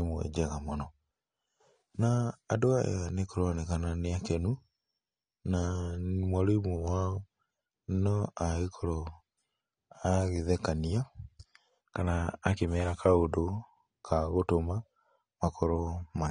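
AAC compression throughout: nothing sounds above 9.7 kHz, with dull, smeared, warbly sibilants, likely from coarse low-bitrate quantisation, which fits about 32 kbps.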